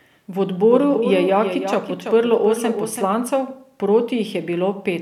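A speech recording with a doubled audio track from 0.72 to 3.14 s. A second full-band copy trails around 300 ms behind, roughly 10 dB quieter, with no decay or room colour. It switches on and off abruptly. Likely cause: a slower second capture path.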